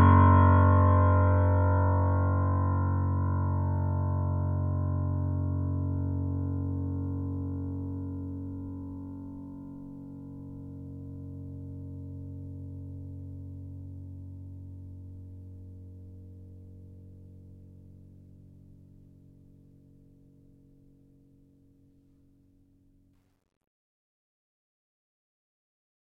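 From 23.13 s to the end, the music's fade-out shows truncation distortion on a fade, which fits an 11-bit gain stage with no dither. From 23.94 s the tail turns gritty. The waveform shows square steps, and the spectrogram shows broadband hash.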